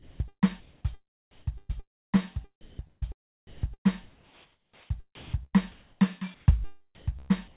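From the start to 0.84 s, the music is chopped by the voice detector. About 0.58 s of quiet passages becomes synthetic noise. The likely cause is the sender's detector toggling transmission. The music gives way to synthetic noise in two or more holes.

From 1.31 to 3.89 s, the chopping returns, replacing about 0.88 s. Inside this stretch, sound is dropped by the voice detector twice. At 2.61 to 2.79 s, 180 ms of music vanishes under steady noise. At 3.47 to 3.63 s, a 160 ms patch of noise covers about 60 ms of lost music. The detector likely judged these quiet moments to be background.

From 4.03 to 7.12 s, chopping replaces about 1.42 s in total. At 6.34 to 6.46 s, comfort noise stands in for the background. The background sits about 35 dB below the loud passages. The receiver likely filled the pause with generated noise at the same level. It sounds smooth and featureless, not like the real background.

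From 6.95 s to the end, chopping replaces about 0.34 s more. Throughout, the call codec leaves nothing above 4 kHz, so the music and the fill noise both sound narrow.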